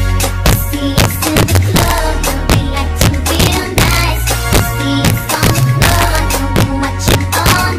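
Integer overflow runs through the whole clip. The signal is driven about 3 dB past full scale. Instead of being limited, each peak above the limit wraps to the opposite sign. Well under one percent of samples are affected, so loud moments break into sharp, violent cracks, harsher than clipping.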